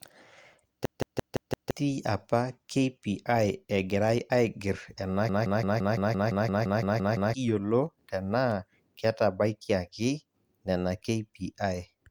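System hang loops at 0.85 to 1.71 s and 5.29 to 7.34 s: the driver stalled while the hardware replayed one 171 ms buffer, which fits an 8192-sample buffer. The result is a machine-gun stutter at about 5.9 Hz that replaces roughly one and two seconds of speech.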